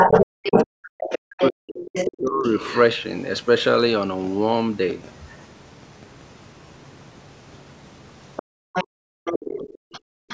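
From the start to 2.8 s, the other side's voice leaks through at roughly the same level as the talker, likely because the loudspeaker echo was not fully removed from the microphone.

Overlapping this, between 0.43 and 2.45 s, the talker's speech is suppressed in double talk. For roughly 1.5 s in total it dips, in places by something like 40 dB. The likely cause is the echo canceller attenuating everything while both sides spoke at once.

A brief, faint scrap of the far side's voice, far below the speech, leaks through at 5.32 to 5.44 s. From 8.36 s to the end, it returns roughly 10 dB under the talker.

During that final leak, the background is gated by the echo canceller twice, at 8.43 to 9.25 s and 9.78 to 10.28 s. The room sound drops by about 40 dB into near silence each time, then comes back when the canceller releases the microphone.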